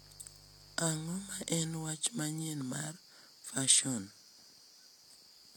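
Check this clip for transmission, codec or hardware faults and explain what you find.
One hardware fault appears: mains buzz from 0.0 to 1.88 s, ending just before "manyien mar fason". Switching spikes at twice 50 Hz inject harmonics into the kilohertz range. The result is a raspy buzz about 25 dB below the speech, distinct from a smooth low hum.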